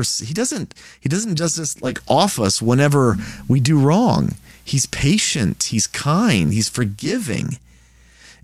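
At 1.67 s the speech cross-fades over 0.44 s from digital radio to the FM analogue feed. The digital radio blending to analogue brings in faint hiss, and level shifts about 3 dB. It blends back at 7.23 s.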